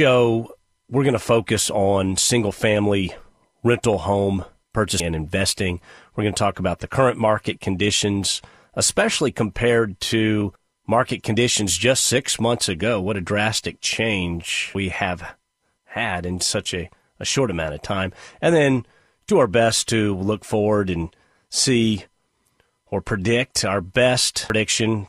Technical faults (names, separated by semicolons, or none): audio missing between chunks